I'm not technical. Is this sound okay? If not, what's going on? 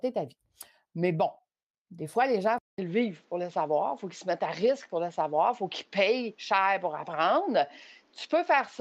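No. At 2.58 s, just after "fois les gens il", the speech cuts out for 0.2 s. It comes back duller, with nothing above 7.6 kHz and a faint new hiss, at the same loudness. This is an input switched to a poorer device, likely another microphone.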